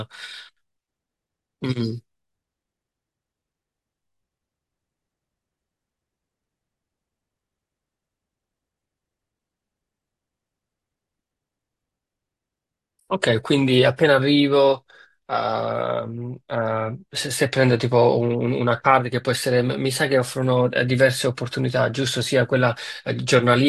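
No technical faults occur anywhere in the recording.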